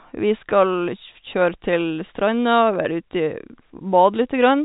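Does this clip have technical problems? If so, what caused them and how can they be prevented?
No, this is ordinary G.711 telephone-coded speech, with the band topping out around 3.8 kHz as the format dictates and its faint level-following coding noise staying well under the voice.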